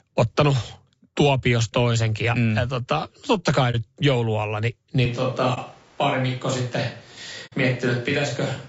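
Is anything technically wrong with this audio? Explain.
Yes, there are three kinds of fault.

Low-delay AAC compression runs through the whole clip. The coder's short analysis frames likely come from AAC-ELD, the low-delay mode used for calls. Those frames cannot separate closely spaced voice harmonics cleanly and leave few bits for detail. The speech sounds plainly rough and grainy, with a noisy haze between harmonics and a thin, artificial-sounding top end. This fits a bitrate of around 32 kbps.

AAC frame loss with muting occurs at 3.71 to 3.75 s, between "totta kai" and "joulualla niin", lasting 30 ms. It recurs at 5.54 to 5.58 s, also 30 ms, and at 7.46 to 7.54 s, lasting 60 ms. At each point the decoder got no data and zeroed the spectrum. The overlapping windows ramp the sound down and back up, so each gap is a soft-edged dropout. The lengths fit one, one and two lost frames.

A switch to a distant microphone happens at 5.06 s, right after "joulualla niin", and lasts to the end. 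The close microphone's feed was likely lost or dropped, leaving a pickup further from the talker. The voice suddenly turns roomy and hollow, loses bass and drops a few decibels. A background of room noise also becomes audible, well below the speech.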